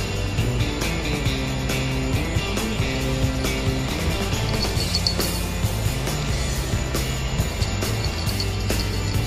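Nothing goes wrong anywhere in the audio, so there's simply nothing here to flag.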